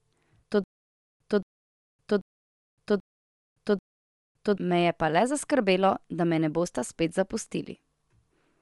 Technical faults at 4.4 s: Bluetooth LC3 compression; stutter with silent gaps

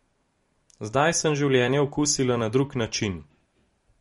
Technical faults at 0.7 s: MP3 compression

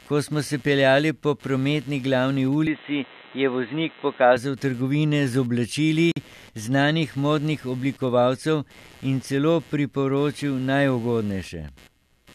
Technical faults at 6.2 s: computer activity noise; gap at a join of encoded pieces

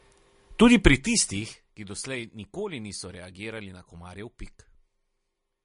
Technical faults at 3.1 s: MP3 compression

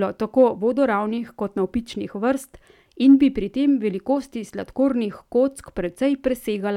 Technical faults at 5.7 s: none

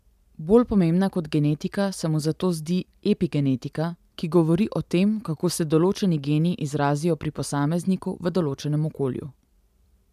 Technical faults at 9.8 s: none

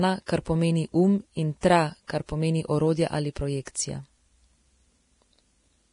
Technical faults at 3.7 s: Vorbis compression; pre-echo

